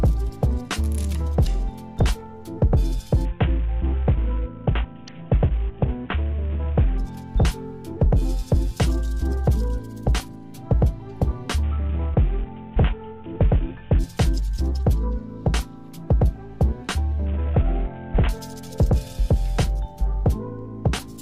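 Bluetooth SBC bit pool drops occur at 3.25 to 6.98 s, 11.63 to 13.99 s, and 17.26 to 18.29 s. The treble dulls and gritty noise rises. This fits a bit pool starved near 54 kbps.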